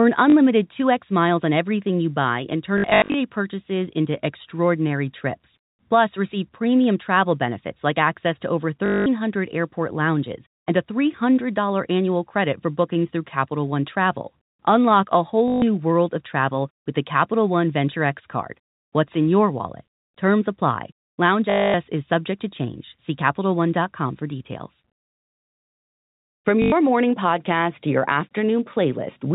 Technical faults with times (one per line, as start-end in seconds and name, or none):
0.30-0.33 packet loss with last packet repeated
2.78-3.14 packet loss with last packet repeated
8.86-9.06 packet loss with last packet repeated
15.48-15.62 packet loss with last packet repeated
21.50-21.74 packet loss with last packet repeated
26.62-26.72 packet loss with last packet repeated